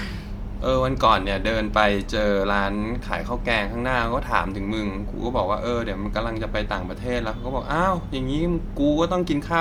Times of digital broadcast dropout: none

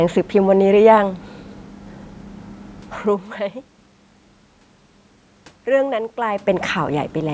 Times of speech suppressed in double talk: none

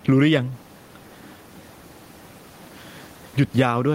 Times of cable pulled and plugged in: none

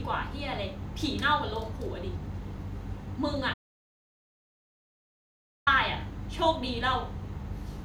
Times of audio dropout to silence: 3.54-5.67

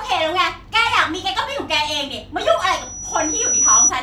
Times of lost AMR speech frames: none

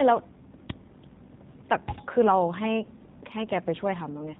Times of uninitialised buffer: 0.70

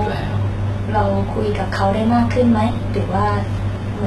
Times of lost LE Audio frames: none

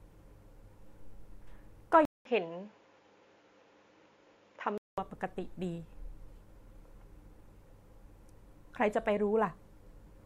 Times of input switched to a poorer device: 2.05-4.98

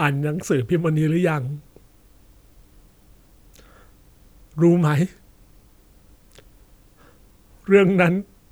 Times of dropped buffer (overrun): 6.56

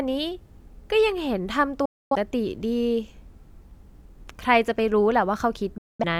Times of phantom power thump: none

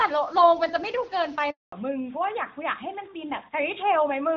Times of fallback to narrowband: 1.72-4.37

